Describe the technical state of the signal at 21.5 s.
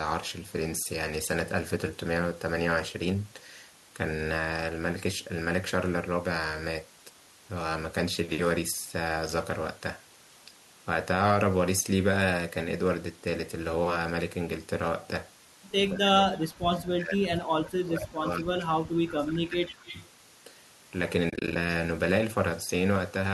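AAC frame loss with muting runs from 21.30 to 21.56 s. About 140 ms of audio is missing, scattered over 260 ms in gaps of up to roughly 30 ms. Short holes like these fit the 10 ms frames of a low-delay AAC stream, likely AAC-ELD. The decoder zeroed each lost frame, and the overlapping windows fade the sound down and back up, so the holes are soft-edged.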